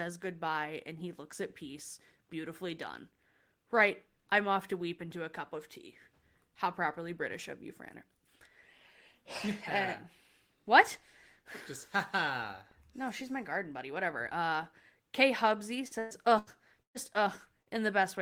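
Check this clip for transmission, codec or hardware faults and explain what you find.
Two transmission faults appear, both late in the speech and both from lost network packets.

Repeated packet loss (robotic sound) runs from 15.87 to 16.98 s. Four gaps, the longest 119 ms, leave about a third of that stretch patched by extending the previous sound. The result is a choppy voice with pieces missing. A spectrogram shows smeared, frozen harmonic bands interrupting normal speech texture.

Short concealed packet loss follows at 17.63 to 17.80 s. About 40 ms never arrived, and 30 ms was filled by continuing the last sound before blending back, stretching timing by a few milliseconds. It is heard as a brief smear. On a waveform it appears as a short, overly regular segment.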